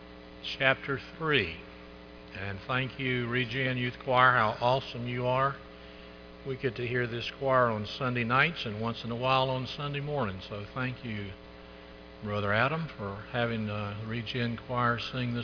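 Nothing in the audio stands out as a technical fault; there's nothing to flag anywhere in it.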